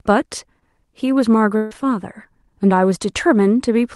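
A speech recording carried over an Opus call path, its top end rolled off near 12 kHz. At 0.59 to 0.63 s, short concealed packet loss leaves a brief smear where about 18 ms was synthesised from the preceding sound, too short to fade. From 1.57 to 1.73 s, a burst of packet loss replaces about 140 ms with a held, decaying continuation without silence, after which the audio resumes further on with content skipped.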